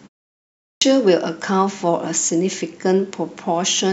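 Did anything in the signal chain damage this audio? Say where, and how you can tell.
Yes. At 0.51 s, after about half a second of silence, the speech bursts in abruptly with its opening sounds missing, and normal onset only returns around 0.82 s, so roughly 0.31 s of sound is swallowed. This is a clipped start after a pause at the playback stage: the output device dropped into a power-saving or idle state during the silence and needed time to wake and re-lock before it passed audio again, discarding the first 305 ms of signal.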